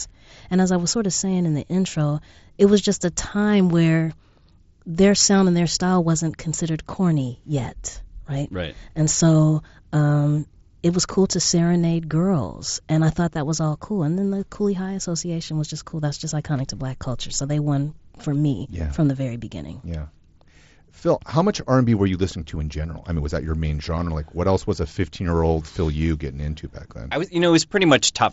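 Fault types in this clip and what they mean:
No fault can be heard in this speech. It comes through a Bluetooth mSBC headset path whose audio stops at about 7.7 kHz, as that wideband codec does.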